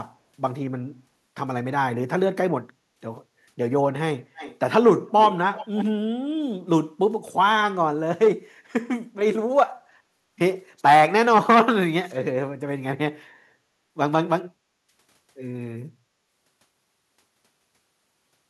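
From 4.34 to 4.59 s and 5.55 to 5.85 s, a faint echo leak repeats the speech 315 ms late. The second is louder. A loudspeaker echo canceller likely missed it.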